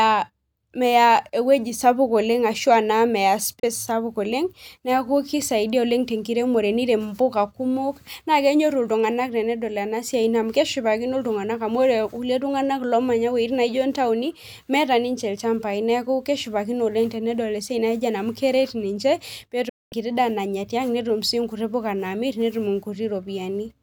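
At 3.60 s the speech mutes for 32 ms, and at 19.69 s for 224 ms, each entered with a 3 ms fade, which fits whole 32 ms frames being dropped. This is a digital broadcast dropout. Unlike a crackling connection, the gaps are clean silence with no noise.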